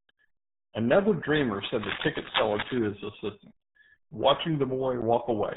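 Throughout the speech, the RealAudio 14.4 codec leaves nothing above 3.8 kHz and damages it heavily, which fits an 8 kbit/s dial-up codec. The result is muffled, gargling speech. Unlike a simple low-pass filter, it adds a watery, smeared texture that a filter alone would not.

From 1.60 to 2.78 s, cable scratch noise sits only a little below the speech, at about -5 dB. It is a dense, irregular rustling, most likely from a worn cable or connector being moved. Unlike steady hiss or evenly spaced clicks, it comes in uneven bursts.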